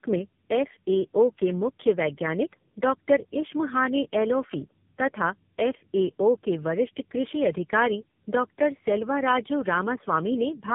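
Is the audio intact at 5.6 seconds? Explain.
No. Tandem speech coding affects the whole clip, including 5.6 s. The speech sounds rough, muffled and warbly, which fits three speech codecs in a row, each re-encoding the last one's output. A spectrogram shows a hard ceiling near 3.6 kHz with smeared harmonics.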